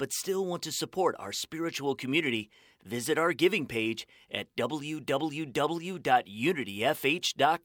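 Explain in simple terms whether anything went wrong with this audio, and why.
Nothing went wrong with this audio: listening through it, there is no fault to be heard anywhere in the recording.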